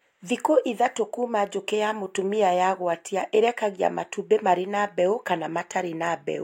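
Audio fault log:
No faults detected in this speech recording.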